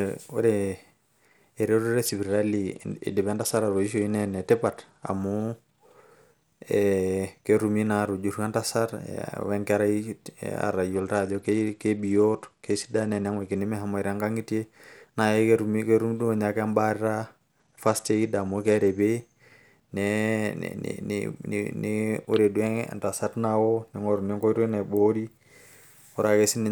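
The speech dulls and turns gritty at 2.05–5.13 s, 10.94–13.58 s and 17.60–19.01 s. That's a Bluetooth SBC bit pool drop, consistent with roughly 88 kbps, starving the treble sub-bands.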